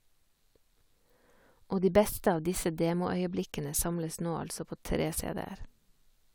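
No technical faults can be heard anywhere in the recording.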